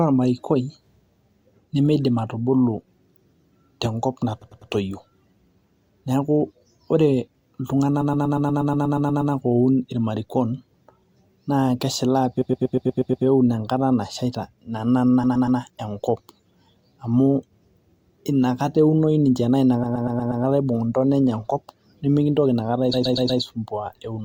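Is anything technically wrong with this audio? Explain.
Yes. Repeated frames stutter the speech at 4.41, 8.01, 12.41, 15.23, 19.83 and 22.93 s. A block of about 100 ms, then 120 ms, replays three to eleven times. Unlike a dropout, nothing goes missing; time is added, 1.32 s at 8.01 s.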